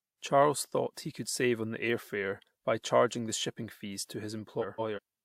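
At 4.61 s, after "the shipping fees to", frames play out of order until 4.99 s. Two 170 ms blocks swap places, giving a garbled flutter.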